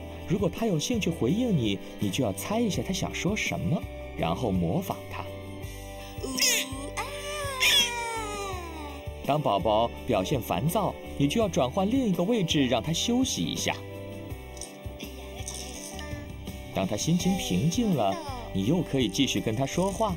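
From start to finish, channel delay (comb filtering) gives the sound a hollow, phasey quality: one channel lags the other by a fraction of a millisecond before mono summing, cancelling shared content at evenly spaced frequencies, starting near 1.5 kHz. A spectrogram shows fixed dark horizontal notch bands.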